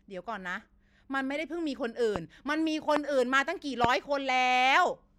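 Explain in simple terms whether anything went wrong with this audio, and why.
Yes, something went wrong. There are three loud pops, at 2.16 to 2.18 s, 2.96 to 2.99 s and 3.84 to 3.87 s. Each is one sharp pop over the speech, which carries on underneath. The likely cause is a sudden electrical pulse, from a plug, a switch, static or a driver glitch.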